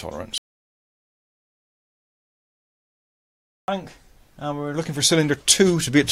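At 0.38 s the sound cuts out abruptly and stays silent, with no room tone, until 3.68 s. This audio dropout to silence removes about 3.3 s of material, most likely from a lost input while the recorder kept writing silence.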